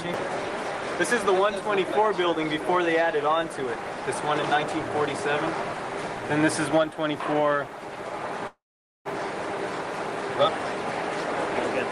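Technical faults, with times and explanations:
8.47–9.07 s, call audio freeze: the sound stalls into 460 ms of silence, then picks up where it stopped, likely delayed packets draining the jitter buffer.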